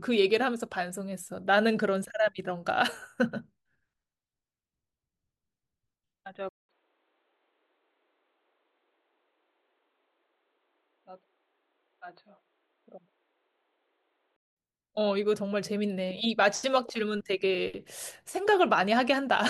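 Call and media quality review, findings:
Input switched to a poorer device, 6.49–14.56 s: 200 ms dropout, then speech dull, nothing above 4.4 kHz, a few dB quieter, different noise floor. Likely capture-device change, not codec bandwidth drop, since tone, level and noise all shift together.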